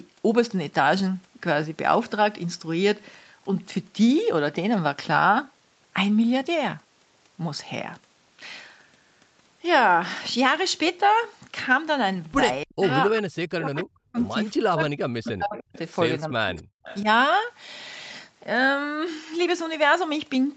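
From 12.64 to 12.85 s, then 13.1 to 14.18 s and 14.6 to 15.74 s, the talker's level collapses in pieces, by as much as around 40 dB. This is speech suppressed in double talk, likely an echo canceller that could not tell this talker from the far side's loudspeaker echo and so attenuated everything. On a waveform the envelope pinches to near silence in chunks. On a spectrogram the energy thins.

Brief echo leak appears at 15.26 to 15.32 s and 15.57 to 15.78 s. It is a faint copy of the voice returning 295 ms late and about 20 dB below the direct speech, likely residual loudspeaker pickup the canceller failed to remove. A spectrogram shows weak, smeared repeats of the preceding harmonic patterns, offset by that delay.

Suppression returns from 16.2 to 16.82 s with the same deep, fragmentary dips. Echo leak fragments land at 16.53 to 16.63 s and 16.84 to 17.02 s, again 295 ms behind and well below the main voice.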